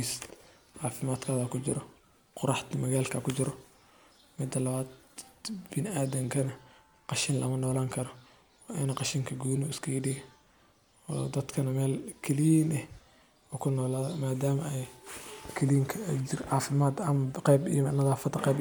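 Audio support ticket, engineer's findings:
No audible technical faults found in the speech signal: level, continuity and timing hold steady throughout, with nothing pointing to a capture, transport or playback problem.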